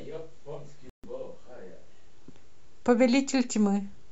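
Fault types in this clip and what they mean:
Bluetooth stall: at 0.90 to 1.05 s the speech drops to about 140 ms of silence, then resumes, likely a drained headphone buffer awaiting resent packets.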